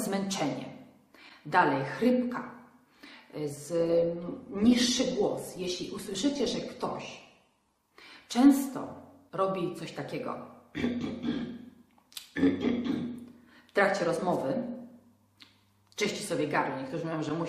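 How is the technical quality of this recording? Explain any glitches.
From 3.79 s to 7.79 s the treble abruptly vanishes above 12.2 kHz and the sound turns thinner, then recovers without a gap. This is an adaptive stream at a lower bitrate, which fits a switch from 64 to 16 kbit/s Opus while the connection slowed.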